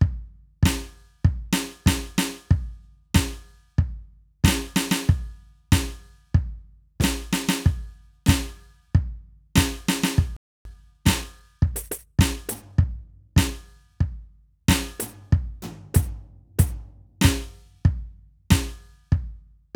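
At 10.37 s the music just drops out for about 0.29 s, a playback stall, and picks up again at 10.65 s. That's most likely the player running dry on data or having its output thread held up, so nothing reached the speakers.

Straight after, from 10.65 to 13.51 s, you get time-compressed catch-up. The player trims its backlog by snipping out tiny slices and cross-fading the joins, so the music runs about 1.1 times fast at the right pitch.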